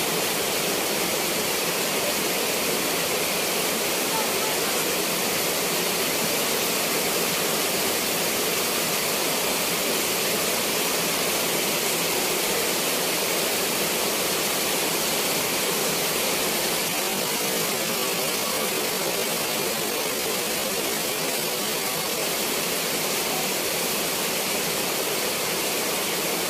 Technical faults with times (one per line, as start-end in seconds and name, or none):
16.86-22.22 time-stretched section